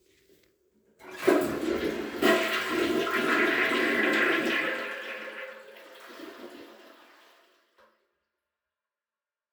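No technical fault can be heard in this recording of sounds. From about 4.5 s the level tapers smoothly down to the end in an ordinary fade-out.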